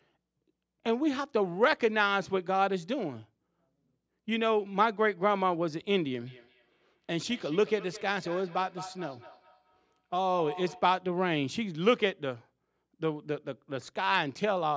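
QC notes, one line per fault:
6.24–10.99 s, feedback echo between two devices: the sound returns at a fixed interval of about a fifth of a second, peaking about 16 dB below the speech. A second device replays it into a nearby microphone. The evenly spaced, discrete repeats distinguish it from room reverberation.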